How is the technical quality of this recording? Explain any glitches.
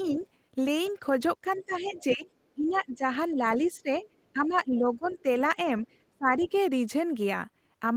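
Quality is compromised by echo-control problems during a two-way conversation.

Other side's voice leaking through at 0.03–0.26, 0.84–2.97, 3.99–5.17 and 6.44–6.61 s: a faint second voice, roughly 25 to 30 dB down, likely loudspeaker echo the canceller missed. It shows as weak extra harmonic traces in the spectrogram.

Speech suppressed in double talk at 1.42–5.28 and 6.15–6.52 s: the talker's level dips by around 15 to 20 dB in patches, likely the canceller attenuating both voices during overlap. The waveform shows notched, shrunken envelopes, and the spectrogram shows dimmed or missing upper bands.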